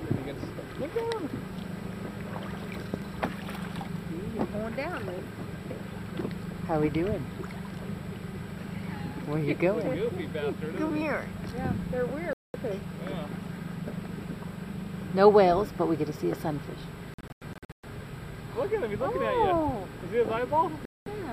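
Bluetooth dropout occurs at 12.33–12.56 s and 20.85–21.08 s as clean silent holes of about 0.21 s each. Between 17.14 and 17.85 s the audio breaks up into a cluster of short gaps totalling about 0.42 s, the longest about 0.12 s. The likely cause is wireless packets reaching the headphones too late and being discarded, so output stops abruptly. Each time it resumes further along, as though the sound had kept playing underneath.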